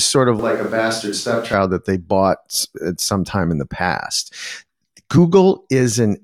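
Right after "sort of", at 0.39 s, the speech turns hollow and roomy, and it stays that way until 1.53 s, just before "that they bought at". The most likely cause is a switch to a distant microphone after the close one dropped out. The level falls by about 5 dB and room noise rises to about 30 dB below the speech. On a spectrogram, the low end thins, reverberant tails smear each syllable, and a faint noise floor fills the gaps. The waveform steps down abruptly at the start and back up at the end.

At 5.17 s, compressed frames were skipped. The decoder dropped roughly 50 ms of audio, which fits about two frames missing or rejected as damaged. The sound jumps forward by that amount. The waveform shows a small discontinuity. The spectrogram shows a narrow vertical seam where the harmonic tracks shift position.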